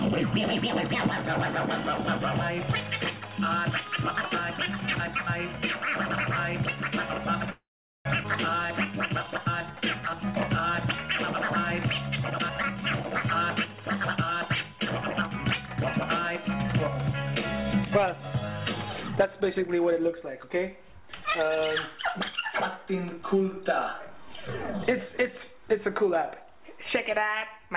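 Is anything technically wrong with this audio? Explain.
Yes. The sound stalls, jumps, drags and then hurries, all through a narrow band with nothing above 4 kHz, consistent with a 64 kbps G.711 A-law call path.

From 7.5 to 8.07 s the sound turns into a fading buzz or hiss and then about 0.44 s of silence before resuming where it stopped. This is a call audio freeze, likely from delayed packets draining the jitter buffer.

From 8.23 to 8.26 s playback jumps forward with almost no gap, losing roughly 0.4 s of material. This skip ahead drops a stretch of audio while later audio is already waiting.

From 8.62 to 10.21 s the sound runs slower, at 90% speed, at unchanged pitch, with drawn-out stretches. This is a jitter buffer slow-down, where repeated pitch periods add 167 ms to rebuild a reserve.

From 12.25 to 14.73 s the sound runs hurried at 112% speed, losing roughly 0.3 s. From 16.48 to 17.36 s it runs slightly faster at 104%, losing about 50 ms. 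Both are jitter buffer speed-ups, where the receiver trims pitch-period slices to shrink excess buffered delay.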